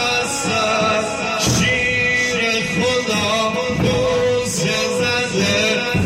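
Nothing stood out as a technical fault on listening to the clip.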